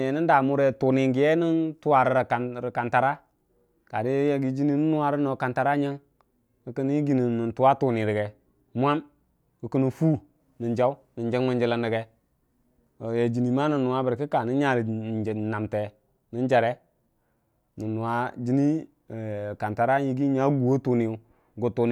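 A speech recording with nothing technically wrong to point to anywhere along the way.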